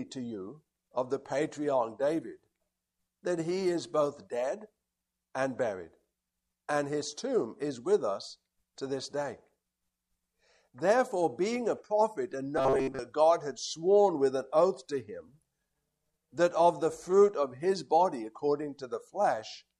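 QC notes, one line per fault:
12.58–13.01 s: robotic sound from repeated short buffers. The audio turns into a rigid metallic buzz at 134 Hz for most of the span. New data likely arrived too seldom, so a segment of about 7.5 ms was looped in place of the missing audio, imposing a buzz at that repeat rate.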